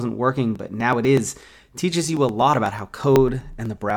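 From 0.56 to 3.90 s, periodic USB or driver dropouts skip roughly a millisecond every 0.124 s, giving evenly spaced ticks in the speech, unlike random clicks.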